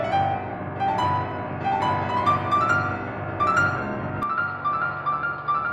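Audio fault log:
4.23 to 5.73 s, input switched to a poorer device: the music abruptly turns dull and boxy with no gap, losing everything above 5.3 kHz, dropping about 5 dB and gaining a new noise floor about 30 dB below the music. The likely cause is a switch to another microphone. A spectrogram shows a flat ceiling at 5.3 kHz; the waveform narrows.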